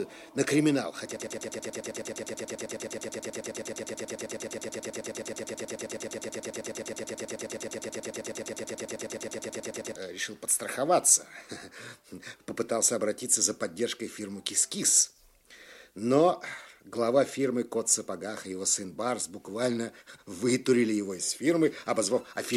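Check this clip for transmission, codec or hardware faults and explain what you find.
One fault is present: a broken-record loop from 1.17 s to 9.96 s. A fragment of about 107 ms repeats exactly, back to back, around eighty times, producing a rapid mechanical stutter at roughly nine repeats per second for nearly nine seconds. The likely cause is a player, encoder or stream that stalled and kept resending the last piece of audio it held. The audio that belonged in that span never arrives and is lost.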